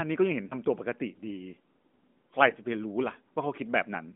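A brief dip or warble interrupts the speech twice, at 0.48 to 0.55 s and again at 2.50 to 2.53 s, each recovering almost immediately. These are lost AMR speech frames. Each sounds like a single dropped 20 ms frame: the decoder fills it by repeating the last good pitch and vocal tract settings at reduced gain. The gaps fall within narrowband AMR audio whose band tops out near 3.5 kHz.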